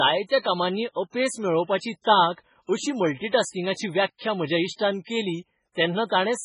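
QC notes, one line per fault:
Throughout, MP3 compression, likely: the speech has heavy watery, swirling artefacts, as weak frequency lines drop in and out between frames and attacks smear. Damage this severe points to a very low bitrate, around 16 kbps.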